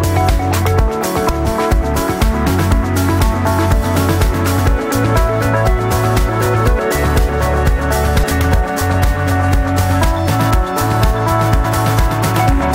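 At 1.28, 4.58, 8.22 and 11.64 s you get compressed frames skipped: the audio jumps ahead, roughly 50 to 150 ms each time.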